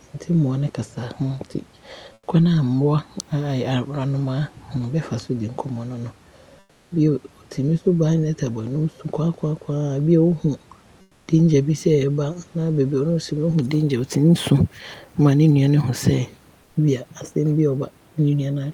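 Comfort noise replaces the room background at 2.13–2.27, 6.59–6.91, 11.01–11.27 and 16.63–16.75 s: flat, featureless hiss about 3–4 dB quieter, likely from Opus discontinuous transmission during pauses.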